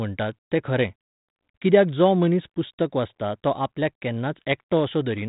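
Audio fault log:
Nothing to flag here: the speech comes over a G.726 link at 32 kbit/s, with the usual telephone-band ceiling around 3.8 kHz and only a light trace of the codec's grain.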